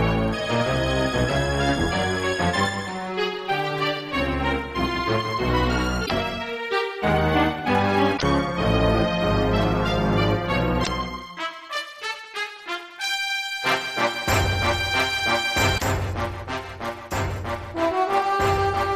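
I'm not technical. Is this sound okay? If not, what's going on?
No. There are four short glitches, at 6.02, 8.14, 10.80 and 15.74 seconds, each lasting about a tenth of a second. This is damaged data in a compressed stream: parts of the stored file were corrupted, so the player misreads those moments, unlike a loose cable or microphone problem.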